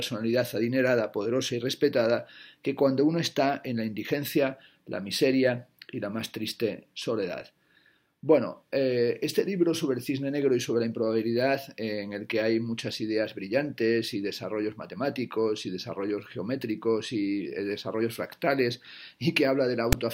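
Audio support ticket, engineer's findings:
File tags played as audio at 19.93 s. Brief hard-edged rasp, then silence. Decoder reading a text tag block and zero padding as samples.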